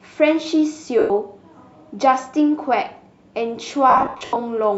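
Lost LE Audio frames: at 0.99 to 1.10 s, about 110 ms of Bluetooth LE Audio went missing, consistent with 10 ms frames. The LC3 decoder refilled the gap by repeating the last spectrum with random signs, turning the speech into a brief noisy smear. From 3.90 to 4.36 s, about 300 ms more was lost in scattered gaps, the longest around 70 ms, giving repeated smeared patches.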